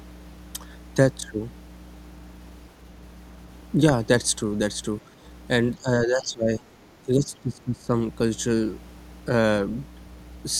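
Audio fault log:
throughout, mains hum: a steady low tone at 60 Hz sits under the speech at roughly 15 dB below it, with a few low harmonics. It sounds like a ground loop or nearby transformer coupling the power line into the signal path.
5.09–5.13 s, 5.76–6.63 s, 7.06–7.91 s, speech suppressed in double talk: the talker's level dips briefly at first, by a few dB, then twice for most of a second, by around 15 and 20 dB. The likely cause is an echo canceller unable to separate near speech from loudspeaker echo.
6.21–6.25 s, other side's voice leaking through: a faint scrap of a second voice, roughly 30 dB under the speech, surfaces inside the suppressed stretch. This is likely residual loudspeaker echo that the canceller failed to remove from the microphone signal.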